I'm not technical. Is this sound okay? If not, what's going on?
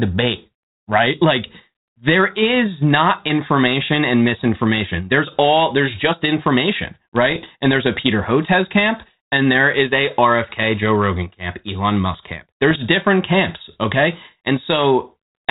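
No. At 7.30 to 7.46 s and 12.70 to 12.78 s, bit errors on an ADPCM link, like a cordless phone's, throw the decoder off, causing pops and rough, crackly bursts.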